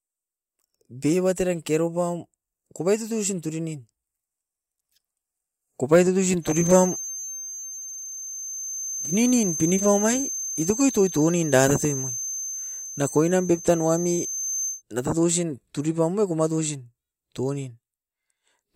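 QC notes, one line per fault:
6.40–14.83 s, feedback whistle: a thin, steady tone at 6.3 kHz sits behind the speech, roughly 10 dB below it, swelling and fading slowly in level for the whole span. The likely cause is a loudspeaker-to-microphone loop held right at the edge of feedback, where the loop gain at that one frequency is just enough to keep the tone ringing without letting it build into a runaway howl.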